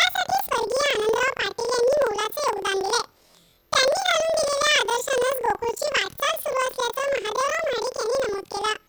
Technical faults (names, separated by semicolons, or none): planar audio read as interleaved